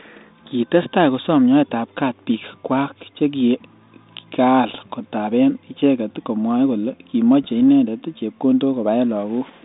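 Bit errors on an ADPCM link hit at 4.69 to 4.75 s, just before "kotaben icheket komwae kole", and again at 7.43 to 7.50 s, just after it. Flipped bits throw off the decoder's step size and prediction. Each burst pops and rasps, with brief level jumps, in the 32 kbit/s G.726 telephone sound.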